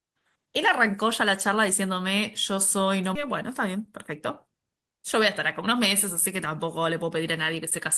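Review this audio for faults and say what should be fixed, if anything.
At 3.15 s the speech skips ahead. About a second of audio is gone, with no fill. The two sides join almost directly. A backlog of queued audio was dropped, cutting the delay by roughly a second. Bound the jitter buffer more gently so backlogs drain before overflowing.

Jitter buffer speed-up follows, from 3.28 to 3.90 s and again from 4.45 to 5.18 s. The speech runs about 8 percent fast at unchanged pitch and sounds hurried. Short pitch-period pieces were trimmed repeatedly, removing roughly 50 ms and then 70 ms. Smoothing packet delivery upstream would avoid the excess buffering that triggers this.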